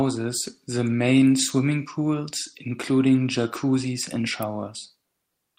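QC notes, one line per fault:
4.43 s, electrical switching spike: a single sharp snap sits on top of the speech at one instant, with no gap or muting around it, so the underlying signal carries straight through. The abrupt, crackly edge, unlike the soft low-frequency thump of a breath pop or the momentary hole of a digital dropout, points to a likely cause in a nearby switch, motor or static discharge arcing briefly and being picked up by the audio line.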